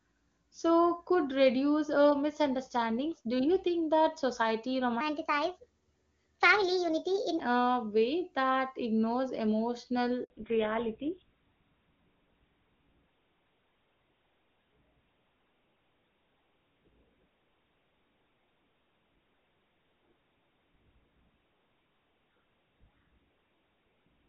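From 5.01 to 7.40 s, a section at the wrong speed plays 1.31 times too fast. Pitch rises by about five semitones at the same moment. The speech turns high and hurried. The likely cause is an editor or player running this stretch on the wrong clock.

At 10.24 s, a handover gap cuts the sound for 60 ms, until 10.30 s. The call was switching networks, and no speech frames came through. The speech fades within a few tens of milliseconds, then falls silent. Whatever was said then is lost.

From 10.30 s to the end, the call shows a fallback to narrowband. Before this point the HD Voice path carries clear wideband speech. Afterwards nothing above 4 kHz remains. The speech sounds duller and rougher, which fits a drop to an older GSM-type codec.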